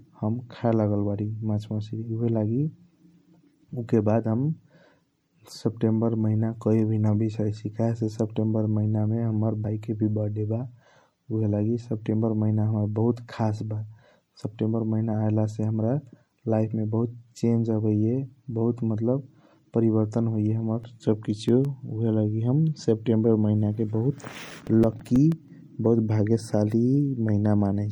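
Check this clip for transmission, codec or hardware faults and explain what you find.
Three things show up in this speech clip: MP3 compression across the whole thing, a skip of compressed frames at 9.64 s, and two bursts of CD scratch ticks later on.

The MP3 compression damage is plainly audible throughout: a watery, swirly quality with dulled treble. That likely comes from a low-bitrate encode, around 64 kbps, where the encoder starved the top end and let weak frequency lines flicker between frames.

At 9.64 s there's a compressed frame skip. A few 24 ms frames never got played, so the audio jumps ahead around 70 ms. Because neighbouring frames overlap, the join comes through as a quick smeared blip rather than a hard click.

CD scratch ticks come in two bursts, from 20.51 to 21.65 s and from 24.18 to 25.48 s. Each is a regular run of ticks, about seven or eight a second, some lasting a few milliseconds. 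A blemish on the disc beat the error correction once per revolution, and the player patched over the lost samples.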